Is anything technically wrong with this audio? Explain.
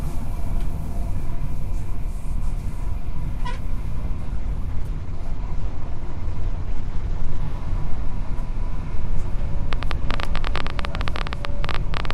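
Yes, there are two faults. From 4.31 to 7.47 s, a call bitrate drop makes the sound rough and muffled, consistent with the encoder falling from roughly 128 to 14 kbps, coding coarsely and trimming high frequencies. From 9.73 s to the end, a train of clicks, irregular pops about 15 per second and roughly 10 dB above the sound, likely comes from electrical interference or a faulty connection or power supply.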